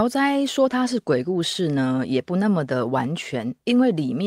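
No technical faults can be heard anywhere in the recording, and the signal stays continuous and steady throughout.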